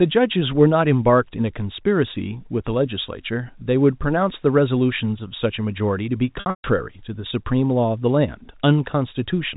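Speech carried over G.711 telephone coding, so a spectrogram shows nothing above 4 kHz. From 6.40 to 6.64 s there is packet loss with pitch repetition. About 200 ms goes missing within that 240 ms stretch, the longest gap 140 ms. The receiver loops the last pitch period, giving a held buzz with flat, frozen harmonics, then fades to near-silence before speech cross-fades back.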